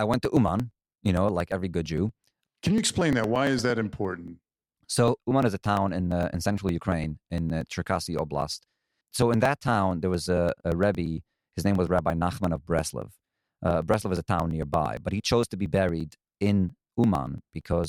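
Speech with periodic USB or driver dropouts: from 0.14 to 17.84 s, around 10 ms is skipped every 0.115 s, producing steady ticks.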